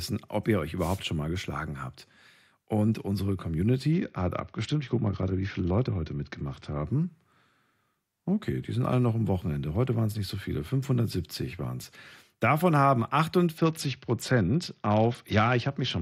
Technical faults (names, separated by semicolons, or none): wireless microphone noise hit; Bluetooth SBC bit pool drop